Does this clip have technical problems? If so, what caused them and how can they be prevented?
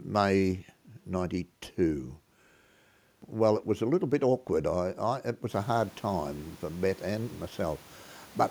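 No technical problems here: the room noise rising by about 16 dB at around five and a half seconds belongs to the recording space, stays about 29 dB below the speech, and needs no prevention.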